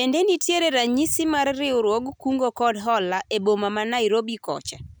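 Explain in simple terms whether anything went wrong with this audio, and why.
Nothing went wrong: the speech plays with no dropouts, glitches or interruptions anywhere in the clip.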